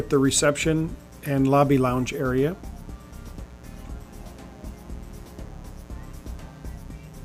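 Switching spikes from a 60 Hz mains supply leak into the signal path throughout, laying a steady, raspy buzz roughly 25 dB below the sound.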